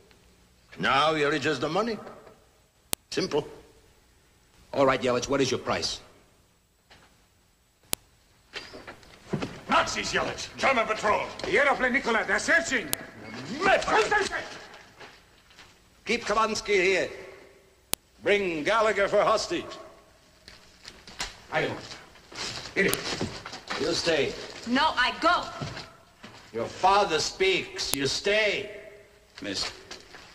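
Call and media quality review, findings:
Sharp click at 2.93, 7.93, 12.93, 17.94, 22.94 and 27.94 s, every 5 s regardless of signal: file header played as audio, WAV chunk headers left in the joined stream and played as samples.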